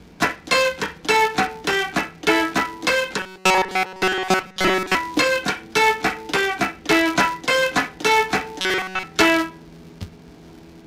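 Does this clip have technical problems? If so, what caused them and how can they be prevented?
Yes. A filter restarted on every block adds a steady 375 Hz buzz throughout, which fits 128-sample blocks. Each block starts from silence with a small tick. Keep filter state between blocks.

From 3.19 to 4.95 s and 8.60 to 9.04 s there is a rigid, metallic robotic sound with a 188 Hz buzz. It is likely caused by repeated short buffers of about 5 ms, covering most of the first stretch and nearly all of the second. Give the audio thread larger buffers or higher priority so new audio always arrives in time.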